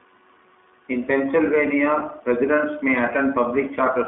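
From start to finish the speech sounds thin, boxed-in and slightly buzzy, with a rough, synthetic edge that is plainly audible. Nothing comes through below about 200 Hz or above 3.6 kHz, so the voice has no body and no air. This is the iLBC codec: it codes each 20 ms frame's excitation on its own, at a rate that fits its 15.2 kbps mode, and that coarse, frame-by-frame modelling leaves the grainy texture.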